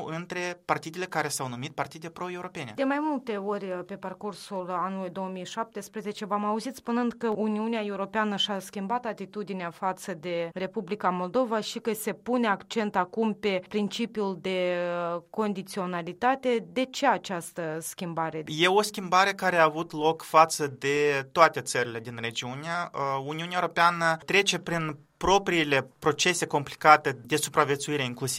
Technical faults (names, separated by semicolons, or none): dropped samples